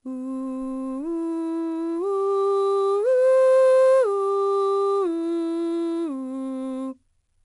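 4-bit ADPCM compression runs throughout. Coarse 4-bit steps from a prediction leave gritty hiss riding every loud passage of the music, and nothing above 10.6 kHz dulls the top.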